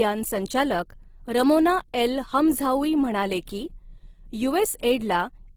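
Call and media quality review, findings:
Speech, whole clip: rough, grainy texture, tonal parts noisy, few spectral holes and little swirling, content up to 20.2 kHz. Likely Opus compression, CELT mode: starved bands refilled by folding and noise, damage consistent with 16 kbps fullband.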